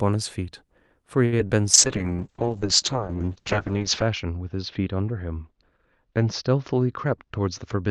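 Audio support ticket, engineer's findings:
Short stall from a late packet, 1.25–1.34 s. The jitter buffer ran dry waiting on a late arrival, so the receiver held the last sound for 68 ms, then resumed where it left off. Nothing lost; one sound drags with a faint buzz.

Short concealed packet loss, 1.38–1.41 s and 1.47–1.52 s. Audio missed the decoder's deadline; the concealment extended the preceding sound and crossfaded back. About 40 ms, then 20 ms, missing. Heard as brief smears just after the stall.

Call bitrate drop, 1.75 s to end. The bandwidth estimate collapsed and the Opus encoder fell from 64 to 7 kbps, staying at its lowest for 2.25 s. Audio bandwidth narrowed from 12 kHz to 8 kHz: coarse, watery, muffled sound through the remainder.

Jitter buffer speed-up, 7.05–7.75 s. Excess buffered delay was trimmed by repeatedly removing pitch-period chunks, about 50 ms in total. Playback runs at 107% with unchanged pitch, so this stretch sounds slightly hurried.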